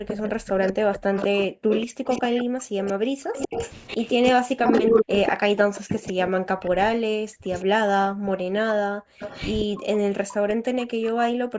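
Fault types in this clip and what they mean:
Speech suppressed in double talk: 0.04 s to the end, the speech repeatedly dips by up to about 40 dB, likely an echo canceller turning down both overlapping talkers.
Echo leak: 0.07–6.68 s, a copy delayed 189 ms returns about as loud as the speech, with fainter scraps at 7.54, 9.19–9.55 and 11.02 s, likely from uncancelled loudspeaker pickup.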